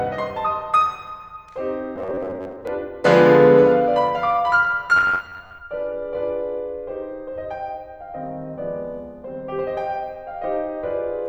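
From 1.96 to 2.67 s and 4.97 to 5.62 s, the music turns into a rigid, metallic buzz near 93.8 Hz. This is robotic sound, likely from repeated short buffers of about 11 ms that replace roughly half the audio in the first span and about 40% in the second.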